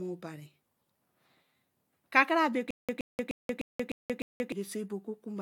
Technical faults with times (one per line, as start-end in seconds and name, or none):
0.00-5.41 generation loss
2.71-4.52 stutter with silent gaps